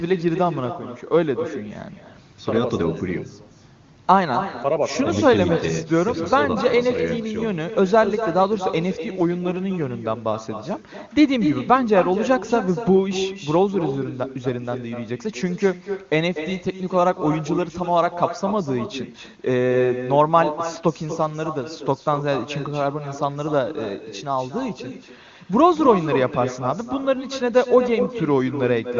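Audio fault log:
Throughout: echo with no canceller. Every phrase returns about 9 dB quieter roughly a fifth of a second later, and thinner, because the far end's loudspeaker feeds its microphone and nothing subtracts that path, so the sound travels back across the network round trip.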